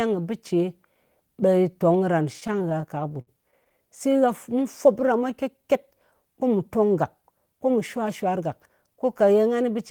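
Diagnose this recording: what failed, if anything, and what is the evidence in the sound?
Network jitter buffer, repeated stalls (stutter): from 2.33 to 3.72 s the speech drags through 18 brief holds, longest 58 ms, where the receiver stretched the last sound while late packets arrived.

Jitter buffer slow-down: from 4.53 to 5.68 s speech runs at 92% speed, unchanged pitch, as repeated pitch periods add 95 ms to rebuild the buffer's reserve.

Jitter buffer speed-up: from 7.7 to 8.97 s speech hurries at 106% speed, same pitch, as the receiver trims about 100 ms of pitch periods to shed excess delay.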